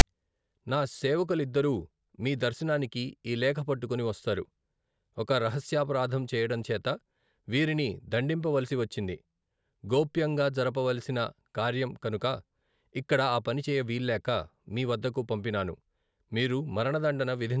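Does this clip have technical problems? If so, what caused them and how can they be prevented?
Yes. At 0.00 s there is a very brief, loud rasp with hard edges, lasting about 13 milliseconds. This is file tags played as audio: a block of text metadata at the head of the file was read by the decoder as though it were sample data. Because text bytes cluster in a narrow range of values, the burst sits offset to one side of zero rather than centred. To prevent it, use a parser that recognises and skips tag blocks before decoding samples.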